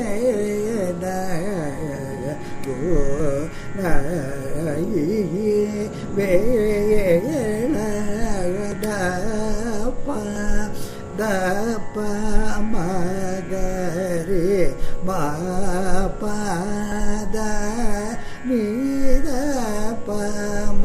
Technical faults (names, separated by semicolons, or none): dropped buffer (overrun)